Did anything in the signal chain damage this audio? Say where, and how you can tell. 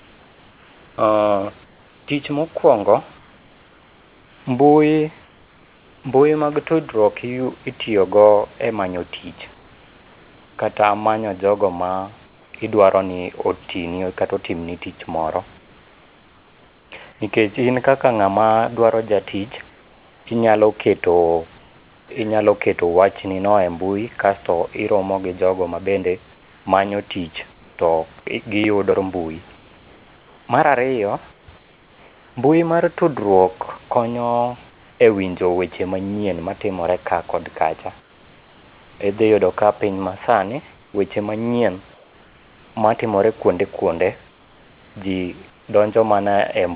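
Yes. In the call processing stage, the sender's voice detector likely switched to discontinuous transmission in pauses, and the receiver filled each gap with comfort noise in place of the background. The real room noise gives way to a flat, featureless hiss at 0.0–6.04, 9.54–12.54, 15.58–17.2 s (after "kata otimni tich moro"), 19.7–22.1, 26.32–32.36, 34.7–35.0 s (before "e winjo weche manyien", about 3 dB quieter) and 38.0–45.68 s (after "matimore ka kod kacha").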